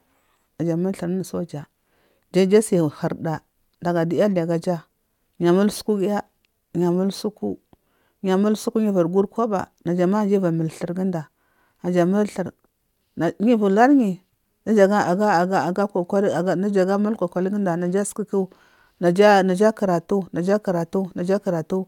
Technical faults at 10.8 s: none

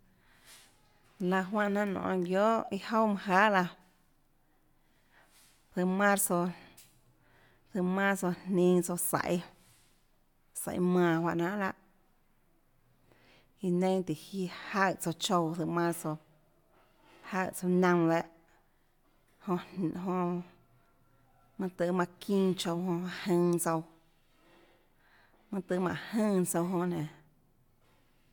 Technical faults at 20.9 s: none

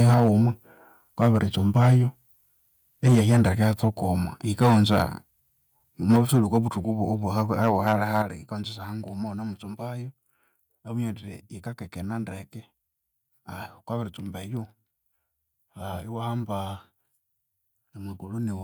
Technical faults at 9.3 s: none

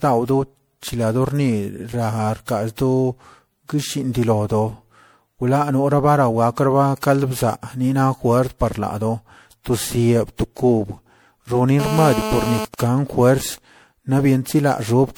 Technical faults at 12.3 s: generation loss; GSM phone buzz

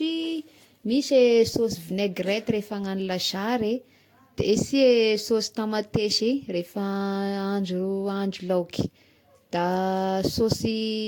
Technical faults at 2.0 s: generation loss

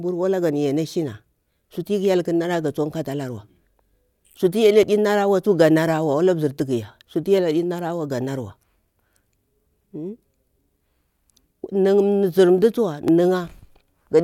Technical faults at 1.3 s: none

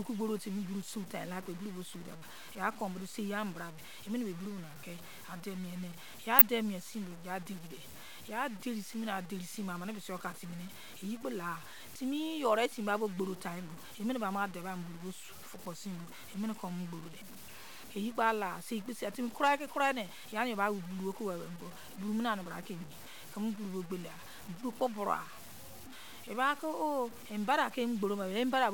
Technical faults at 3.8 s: low bit depth without dither

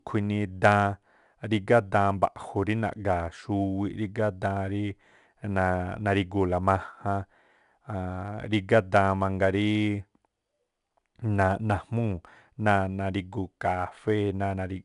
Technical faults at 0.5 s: 4-bit ADPCM compression

